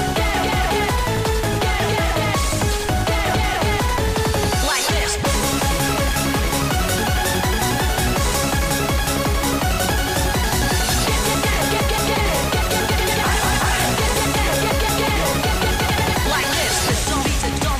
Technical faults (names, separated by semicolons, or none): none